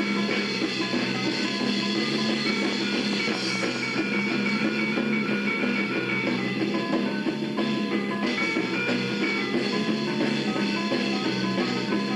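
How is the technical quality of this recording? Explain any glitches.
The recording has one glitch, a train of clicks from 2.51 to 4.20 s. About ten near-identical pulses arrive at a regular 4.8 per second, likely from electrical interference or a faulty connection or power supply, and they tick sharply over the sound, peaking around 5 dB above it.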